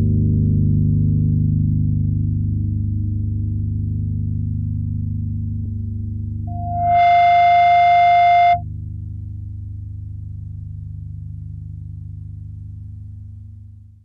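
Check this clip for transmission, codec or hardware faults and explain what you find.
Two faults are present: a short burst of damaged data in a compressed stream, followed by a loudspeaker feedback squeal.

At 5.64 s there is damaged data in a compressed stream. Part of the encoded audio was corrupted, so the decoder misread that frame, lost its place in the bitstream and resynchronised at the next valid frame header. The result is a brief chirp or blip of under 20 ms, where the sound glitches.

From 6.47 s to 8.63 s there is a loudspeaker feedback squeal at 700 Hz. A microphone picked up the loudspeaker it was driving, and at 700 Hz the loop gain rose above one, so that frequency reinforced itself on each pass. The tone swells over about half a second into a steady howl roughly 10 dB above the rest of the sound and lasts just over two seconds in all.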